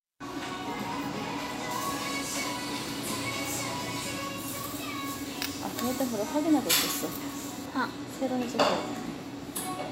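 From 1.71 to 7.66 s, pre-emphasis is left on: an FM 50 µs treble boost was never undone, raising 10 kHz about 11 dB. The sound turns thin and bright, and a spectrogram shows the top bands glowing far hotter.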